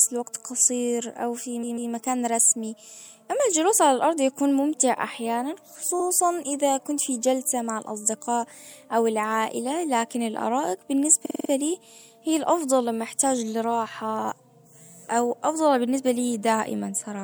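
At 1.62 s, just after "او في", the speech stutters: a 144 ms block of repeated frames plays twice more, adding 0.29 s. At 5.99 s, after "الارض يكون ممتع احيانًا", a 72 ms block repeats once before "اذا كنت في جلسة". At 11.25 s, after "او العائلة لكن الارائك", a 48 ms block loops five extra times, adding 0.24 s. The decoder is re-reading the same compressed data, which fits a 24 ms frame size.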